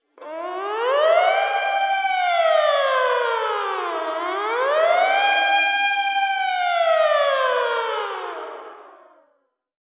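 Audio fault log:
No faults detected in this recording of sounds.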